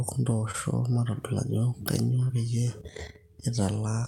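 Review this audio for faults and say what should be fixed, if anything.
Two brief smears break the speech, at 0.51 to 0.56 s and at 2.28 to 2.31 s, each a momentary wobble where the sound blurs before blending back. Both are short concealed packet loss: about 20 ms of audio arrived too late or not at all, and the receiver bridged each gap by extending the preceding sound, roughly 21 ms of fill at the first and 15 ms at the second, then crossfaded into the real signal. Preventing this means reducing packet loss and late arrival on the network path, for example with a larger jitter buffer or forward error correction.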